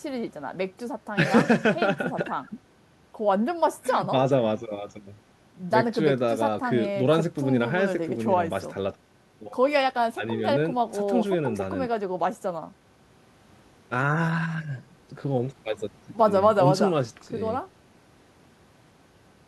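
Listening through the speech recording, nothing stood out as a technical fault at any point.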